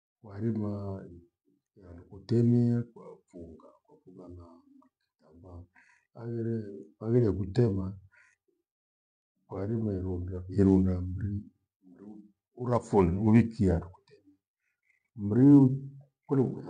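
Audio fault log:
No faults across the whole recording.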